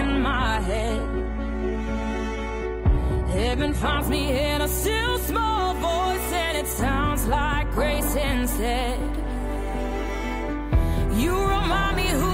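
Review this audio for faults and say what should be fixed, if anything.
For the first 4.0 s the top end is thin and a bit swirly, with nothing above 11.8 kHz, which sounds like a 16 kbit/s HE-AAC rendition. It then steps cleanly, with no gap, to what sounds like 96 kbit/s AAC-LC. That's an adaptive stream starting at a low bitrate. Start on a higher rung, or cache a throughput estimate, so playback begins at full quality.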